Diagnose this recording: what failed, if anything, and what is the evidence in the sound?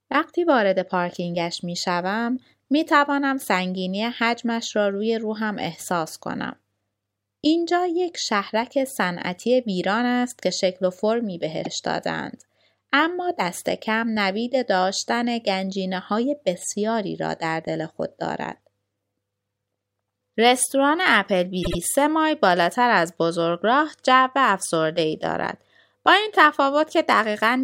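Repeated frames, at the codec or storage stage. The speech stutters at 11.64 s, where a 52 ms chunk plays twice, and from 21.62 to 21.77 s, where a 78 ms chunk plays three times. Duplicated encoded frames get decoded again, lengthening the audio.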